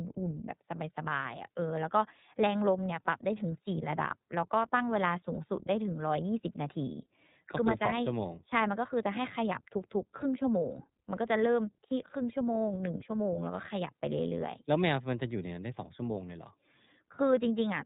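Speech coded with the iLBC codec throughout, with plainly audible damage. Nothing passes above 4 kHz, and each frame's excitation is coded on its own, which leaves the voice clear but rough and faintly synthetic. The coder runs on iLBC's 30 ms frames in its 13.33 kbps mode.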